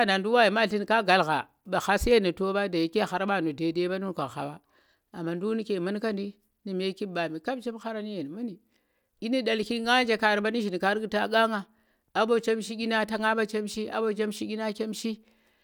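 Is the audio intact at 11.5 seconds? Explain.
Yes, at 11.5 seconds the speech runs through cleanly, with no dropout, click, distortion or other fault at that moment.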